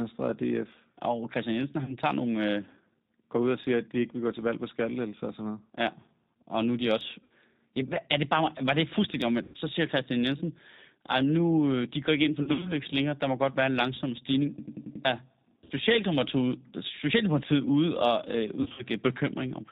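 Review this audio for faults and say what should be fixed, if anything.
The whole clip carries G.729 codec coloring. This 8 kbit/s coder rebuilds speech from a filter, a pitch predictor and a few pulses per frame, so nothing above 4 kHz remains and the voice sounds rough and slightly synthetic. Unlike plain low-pass filtering, the roughness comes from pulse-based modelling. It can be avoided by using a wideband codec or a higher-rate link.

VoIP packet loss concealed by the speech codec occurs at 1.84–1.96 s, 7.24–7.32 s, 9.44–9.57 s, 12.43–12.72 s, 15.64–15.73 s and 18.62–18.84 s. Missing audio ran 40 to 120 ms. At 12.43 s and 18.62 s the losses are scattered, with runs of up to 60 ms. In each case the decoder stretches the last pitch and filter into a fading buzzy tone or coloured noise, and the voice stays weak for a moment afterwards. That gradual fade and slow recovery separate it from an exact repeat. 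Prevention requires a jitter buffer, forward error correction or a more reliable network path.

A system hang loop runs from 14.58 to 15.05 s. A 92.88 ms piece repeats exactly five times, a stutter at 10.8 Hz, which fits a 4096-sample buffer. About half a second of sound is lost. The identical, undecaying repeats distinguish it from codec concealment. It can be prevented by fixing the driver or system stall so the audio buffer keeps being refilled.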